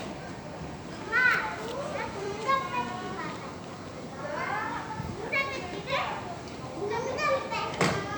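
Everyday sound recording with no audible technical faults.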